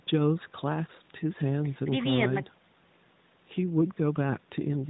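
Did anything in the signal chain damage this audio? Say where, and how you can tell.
No, nothing in this speech stood out on listening as damage from any stage of the chain.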